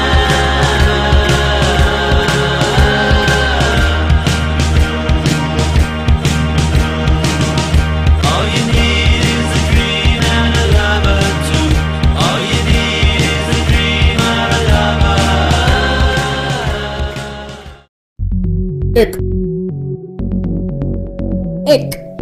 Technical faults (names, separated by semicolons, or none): none